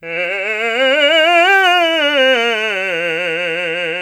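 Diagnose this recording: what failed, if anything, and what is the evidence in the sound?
Nothing failed; the music shows no audible fault.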